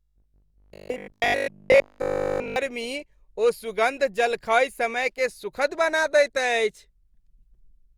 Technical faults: robotic sound from repeated short buffers

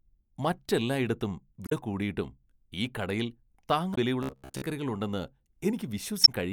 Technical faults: damaged data in a compressed stream; robotic sound from repeated short buffers

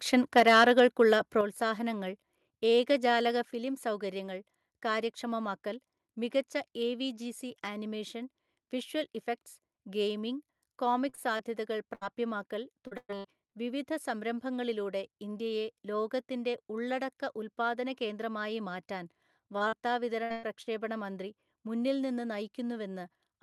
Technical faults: microphone overload; microphone volume stepped down; repeated packet loss (robotic sound)

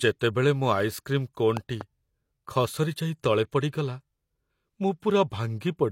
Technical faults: loud pop

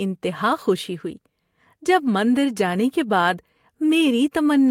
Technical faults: none

